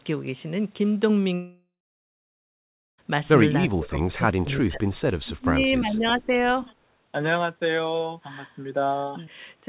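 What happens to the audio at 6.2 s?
The voice is sunk well down, by about 20 dB at its deepest, within a dip from 5.24 to 6.34 s that swallows roughly a second of speech. This is speech suppressed in double talk, likely caused by the far side talking at the same moment: the echo canceller could not tell this talker's voice apart from its loudspeaker's echo, so it attenuated everything it heard rather than risk sending echo back.

Inside that dip, from 6.19 to 6.26 s, a faint, brief scrap of the voice returns about 347 ms late, some 30 dB under the speech. That is an echo leak, likely from a loudspeaker whose echo canceller let a residue of its own playback through the microphone and back down the line, where it surfaces as a delayed ghost of what was said.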